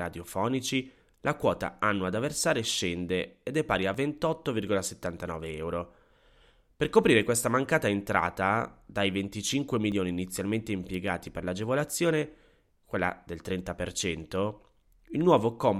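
At 3.94 s, just after "ed è pari a", and again at 9.92 s, just before "inizialmente impiegati per l'agevolazione", the speech jumps forward by around 30 ms, with the two sides butted together and no gap of silence. These are audio missing between chunks. The spacing of about 6 s points to the recorder likely processing in 6-second blocks and dropping a short stretch at each handover, so the skips recur at that interval.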